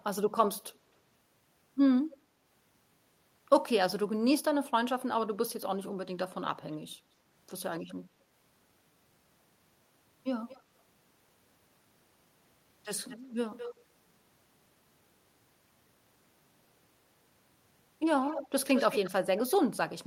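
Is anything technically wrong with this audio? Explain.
Yes. Brief delayed copies of speech, trailing by roughly 210 to 270 ms and mostly growing louder toward the end, return at 0.67–0.74, 7.81–7.95, 10.48–10.62, 13.08–13.33, 13.57–13.84, 18.26–18.49, 18.75–19.10 and 19.37–19.52 s. This is likely echo leak: a loudspeaker side's echo canceller let picked-up playback through.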